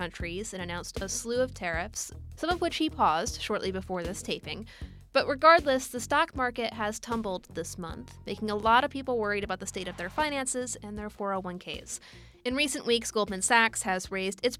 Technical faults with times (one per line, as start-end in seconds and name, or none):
none